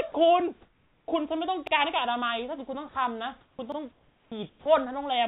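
From 0.12 to 0.14 s, 20 ms of speech drops to steady noise, likely sound dropped by the voice detector misjudging it as background. From 0.62 to 1.08 s the room background turns featureless: comfort noise in place of the background, likely from discontinuous transmission, at an unchanged level. At 1.67 to 1.72 s, overlapping chunks repeat about 48 ms at a join, a stutter recurring with 2 s chunks, again at 3.72 to 3.77 s. At 2.89 to 2.95 s, 60 ms of speech is likely dropped by the voice detector. From 3.41 to 3.59 s comfort noise replaces the background, about 9 dB quieter. The speech onset at 3.55 to 3.59 s loses 40 ms and starts abruptly, likely an onset clipped by the voice detector. From 3.92 to 4.32 s comfort noise drops the background about 10 dB, then the onset at 4.28 to 4.32 s is likely clipped by 40 ms. From 4.50 to 4.66 s, 160 ms of steady noise replaces the sound, likely dropped by the voice detector, which loses 80 ms of speech.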